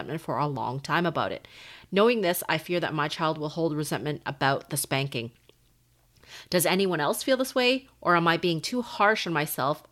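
No audible technical faults.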